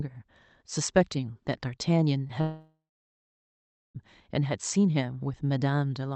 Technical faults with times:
2.27-2.31 short concealed packet loss
2.41-3.97 long network dropout

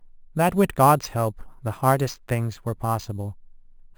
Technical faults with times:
0.00-3.97 imaging from sample-and-hold upsampling

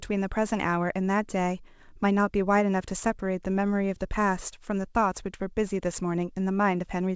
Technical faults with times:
none

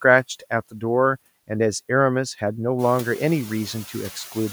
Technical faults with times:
0.00-4.52 noise suppressor artifacts

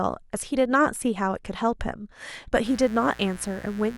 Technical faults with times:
2.62-3.97 mains buzz

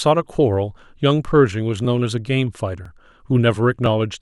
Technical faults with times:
0.84 overlapping chunks
1.85 overlapping chunks
2.85 overlapping chunks
3.86 overlapping chunks

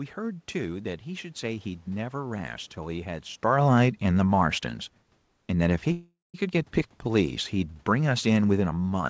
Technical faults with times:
3.31-4.70 automatic gain falling
5.92-6.36 call audio freeze
7.04-9.09 automatic gain falling

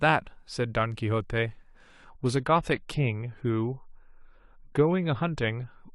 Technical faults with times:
1.93-5.95 adaptive stream at a lower bitrate

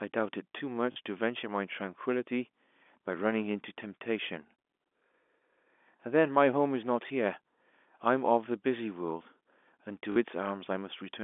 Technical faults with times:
0.92-0.96 packet loss with last packet repeated
7.08 packet loss with last packet repeated
10.12-10.16 packet loss with last packet repeated

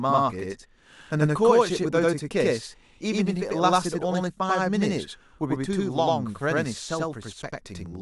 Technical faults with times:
0.00-8.02 channel delay (doubling)

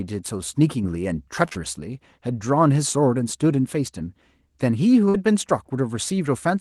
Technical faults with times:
0.74-0.84 sudden gain jump
1.45-1.57 short concealed packet loss
5.09-5.16 burst of packet loss

